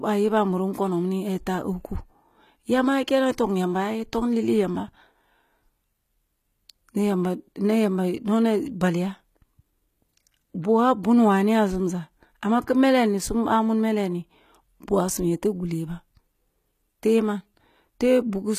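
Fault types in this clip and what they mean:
HE-AAC compression: The speech carries a plainly audible coarseness across the whole clip, with s sounds coming out gritty and lispy and the upper range sounding synthetic, ending sharply at 14.9 kHz. This is likely HE-AAC coding, which encodes only the lower spectrum and fakes the treble by copying lower bands upward under a rough envelope, so the rebuilt harmonics fail to match the real ones. The damage fits a bitrate near 20 kbps.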